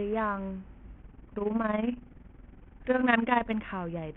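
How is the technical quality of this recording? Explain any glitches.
The recording is technically poor, with two clear faults in this speech clip.

Throughout, the treble is thin and flickering, with gritty noise and aliasing riding on the voice. This is likely Bluetooth SBC compression at a starved bit pool, around 48 kbps, which leaves the upper sub-bands with few bits. Unlike a plain low-pass filter, the top end comes and goes rather than stopping cleanly.

From 1.02 to 3.55 s there is overlap-add ripple: the level pumps by about 11 dB around twenty times a second, giving a rough flutter. The windowed frames were rejoined with an overlap that doesn't sum to constant gain. Its steady, frame-locked rate separates it from irregular packet-loss dropouts.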